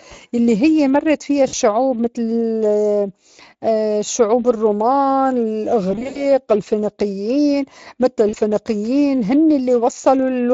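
Throughout, the speech carries plainly audible Speex codec damage: a hoarse, grainy texture in the voiced sound, which fits a Speex mode near 20 kbps, where the CELP excitation gets too few bits to follow the signal closely.

VoIP packet loss concealed by the speech codec occurs at 1.47–1.54 s after "هيّ مرّت فيّا" (60 ms missing), at 4.05–4.08 s, at 5.91–6.24 s before "الفينيقيّن متل" (gaps scattered, longest 80 ms), and at 8.29–8.35 s after "الفينيقيّن متل". The decoder repeats the last pitch and filter at falling gain, giving brief buzzy, fading stretches.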